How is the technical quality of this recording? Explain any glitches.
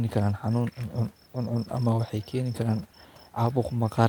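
Nothing stood out on listening to this speech recording, which has only a faint room noise sitting about 35 dB below the voice.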